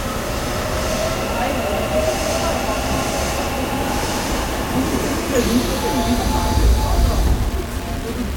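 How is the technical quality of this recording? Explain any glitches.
Technical quality is poor. The whole clip has low bit depth without dither: grainy distortion that tracks the sound, likely from rounding to roughly 5 bits, leaving error only about 15 dB down.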